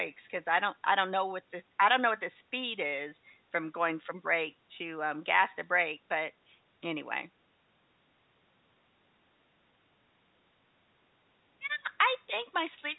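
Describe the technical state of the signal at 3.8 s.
At 3.8 s the audio is intact, with no fault at that moment, only the narrow telephone-band sound of G.711 coding.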